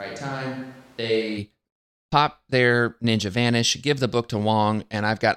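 A short speech recording opens sounding roomy and hollow, thin in the bass and about 5 dB quieter, with room noise sitting only around 30 dB below the speech. This quality is already present when the clip begins and ends abruptly at 1.37 s, when the sound snaps to a close, fuller tone. The likely cause is a switch to a distant microphone: the close microphone's signal was missing, so a farther pickup captured the room along with the voice.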